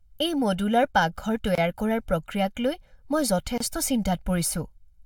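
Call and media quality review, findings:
Channel delay (comb filtering), whole clip: one channel lags the other by around 1.5 ms before mono fold-down. Shared content cancels at evenly spaced frequencies, first notch near 400 Hz, leaving the speech hollow and phasey throughout.

Gap at a join of encoded pieces, 1.55 s and 3.58 s, about 2 s apart: separately encoded segments concatenated untrimmed, with encoder start delay and final-frame padding left in. Dropouts of 25.3 ms and 26.7 ms, edges smeared, with speech resuming where it stopped.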